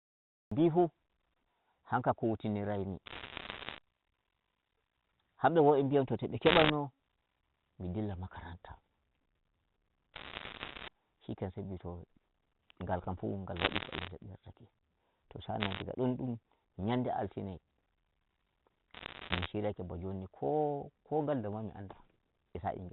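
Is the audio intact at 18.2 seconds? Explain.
Yes, the speech at 18.2 seconds is intact, carried through the G.711 telephone coding with its usual 4 kHz ceiling and no fault at that moment.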